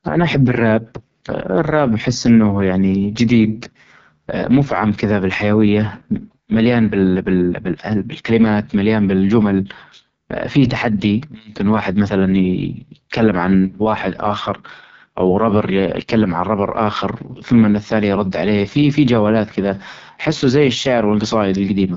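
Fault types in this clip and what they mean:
AMR wideband (HD Voice) codec: Throughout the speech, the rough, raspy, buzzy texture points to AMR-WB at its lowest rate, around 6.6 kbit/s, where the pulse-driven vocal tract model cannot follow the voice finely. Content stops near 7.5 kHz, and the band just below it is filled with shaped hiss rather than real detail. That wideband ceiling separates it from narrowband telephone coding, which cuts off far lower, and from a plain low-pass filter, which leaves no grit.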